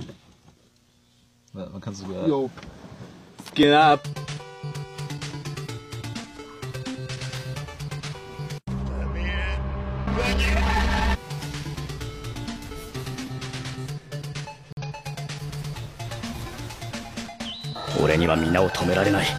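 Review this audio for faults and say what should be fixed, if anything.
Corrupt frame muted: flipped bits in the compressed stream made the decoder reject the damaged data, and the player filled the gap with silence. The sound drops out abruptly from 14.73 to 14.83 s, a hole of about 0.1 s that fits two lost frames, and the timing afterwards stays intact.

Corrupt frame decoded: at 16.52 s a damaged frame was decoded anyway, with misread gains or codes. This spreads energy into the wrong frequencies for about one frame length of around 22 ms, giving a short error peaking around -30 dBFS.

Protecting the stream with checksums and error correction, and using packet-loss concealment instead of silence or playing bad frames, would prevent both.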